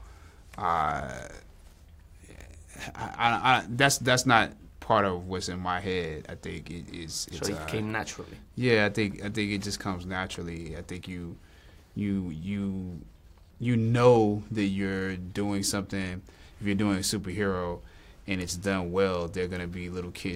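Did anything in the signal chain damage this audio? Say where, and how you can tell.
No, nothing in the signal chain damaged this audio.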